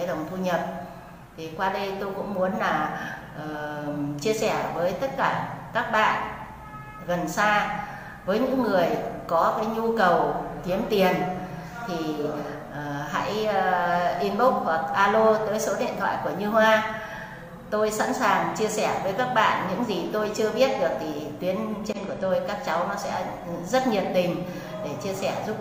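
No technical faults are audible.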